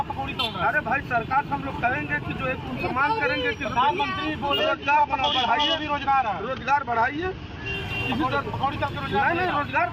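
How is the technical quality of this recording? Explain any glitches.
The recording has one clear glitch. From 4.59 s to 7.74 s the top end goes dull and a gritty, grainy noise rides on the sound, then clears as the full treble returns. This is a Bluetooth SBC bit pool drop: under link congestion the encoder cut the bits per frame, which fits a fall from a bit pool of about 28 to about 10, near 84 kbps. Starved of bits, the highest sub-bands go empty and the remaining ones are quantised coarsely, causing both the muffling and the grit until the rate recovers.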